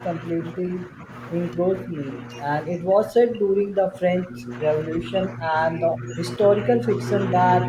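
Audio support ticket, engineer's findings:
Speech suppressed in double talk at 0.0–1.1, 1.57–2.06, 2.67–4.52, 4.88–6.2, 6.39–7.41 and 7.58–7.68 s: level dips up to about 20 dB; waveform envelope notched, spectrogram faded. Likely echo canceller mistaking talker for echo.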